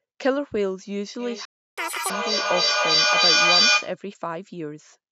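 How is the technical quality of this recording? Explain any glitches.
The recording has three distinct glitches, all clustered in the first four seconds, over a band with only the lowest bass removed, as the call's microphone processing leaves it.

Feedback echo between two devices runs from 1.19 to 4.02 s. Another device in the room plays back this call's audio, and this microphone picks it up again. Its echo canceller cannot remove sound played by the other device. Each phrase returns roughly every third of a second, thinner and more ringing each pass, and the repeats build to about 8 dB above the speech instead of fading. That build-up is what separates it from room reverberation.

A playback stall cuts the sound to silence from 1.45 to 1.78 s, a gap of 0.32 s. The player most likely ran out of buffered data or had its thread blocked. It is a clean hole with no crackle or stutter, which tells it apart from dropped packets being concealed.

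Catch-up at higher speed follows immediately, from 1.78 to 2.10 s. The player resamples its backlog at 2.0 times normal speed, so the sound jumps up by nearly an octave and rushes before snapping back. Because pitch and tempo rise together, this is resampling and not time-stretching.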